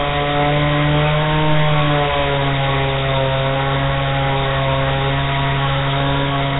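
Nellymoser compression runs throughout, with nothing above 3.8 kHz. The coding is heavy, likely from Flash's Nellymoser Asao codec at around 16 kbps: weak bands receive no bits and get filled with noise, leaving a rough, hissy halo and a smeared, underwater quality.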